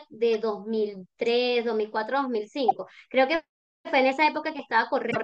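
A speech recording with brief glitches at 0.34 s, from 2.68 to 2.72 s and from 5.08 to 5.17 s, where damaged data in the compressed stream made the decoder lose frame sync.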